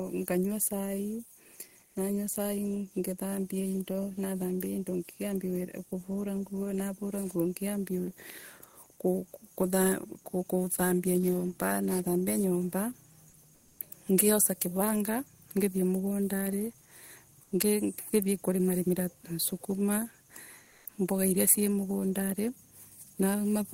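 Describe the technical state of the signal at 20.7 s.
Comfort noise in place of the background fills 20.65 to 20.83 s. The sender likely paused transmission through discontinuous transmission, so the receiver substitutes synthetic noise. For 180 ms the real background, about 34 dB below loud passages, becomes steady, featureless hiss, shifting about 2 dB in level.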